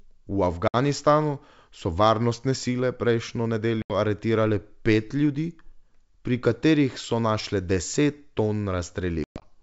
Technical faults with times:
0.68-0.76 packet loss on an ADPCM call
3.82-3.94 packet loss on an ADPCM call
9.24-9.52 packet loss on an ADPCM call

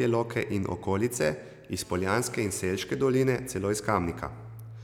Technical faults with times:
1.80-2.85 GSM phone buzz

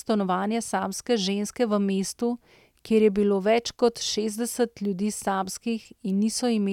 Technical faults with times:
none

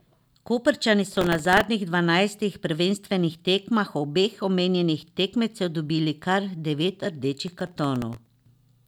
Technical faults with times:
1.07-1.64 processor overload crackle
7.48-8.26 processor overload crackle

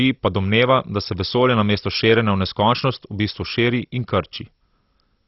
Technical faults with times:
0.00-5.28 MP2 compression

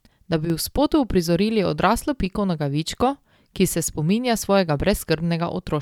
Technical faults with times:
0.45-0.50 one channel drops out

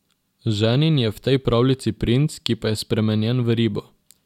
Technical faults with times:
none

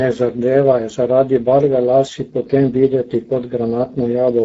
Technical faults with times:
0.00-4.44 Speex codec

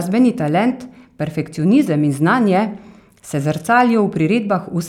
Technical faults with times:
none

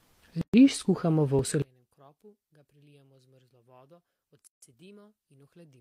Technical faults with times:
0.41-0.54 gap at a join of encoded pieces
1.39 dropped buffer (overrun)
1.62-5.80 one channel inverted
4.47-4.62 gap at a join of encoded pieces

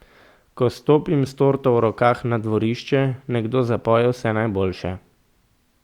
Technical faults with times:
none

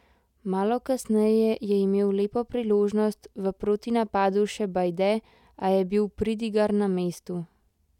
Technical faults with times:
none

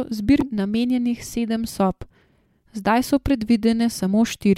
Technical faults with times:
0.38-0.42 damaged data in a compressed stream

